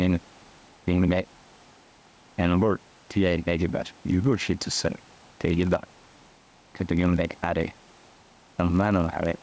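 A speech recording, heard through call microphone processing with nothing above 8 kHz, shows gain pumping across the whole clip. The gain ducks by roughly 5 dB under each loud syllable, likely from input gain set far too high with a fast limiter pulling it back. On a waveform this looks like a flattened envelope with the noise floor rising between phrases. From 3.88 s to the end there is a padded block size mismatch. A short zero-filled gap lands in every block, producing a 46.9 Hz buzz that fits 1024-sample reads at 48 kHz. The audio slows by only a factor of 0.999, so the pitch is essentially unchanged. A spectrogram shows thin vertical dropout lines about every 21 ms, and the waveform shows regular flat gaps.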